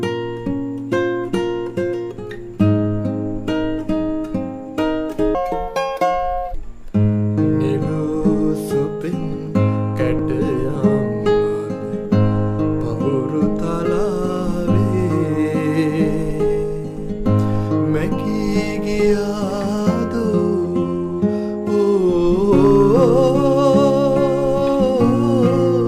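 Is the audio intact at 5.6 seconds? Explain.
No. From 5.35 to 6.55 s there's a section at the wrong speed: it runs 1.72 times too fast, most likely from being played against the wrong clock, so the sound jumps up about ten semitones and rushes before snapping back to normal.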